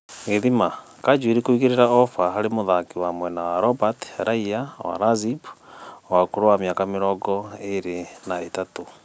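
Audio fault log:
No faults logged; the speech passes through call microphone processing, which rolls off the lowest bass and leaves nothing above 8 kHz, as expected for that path.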